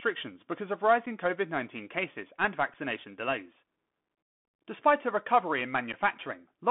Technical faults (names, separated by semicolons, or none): Bluetooth CVSD headset codec; unconcealed Bluetooth headset packet loss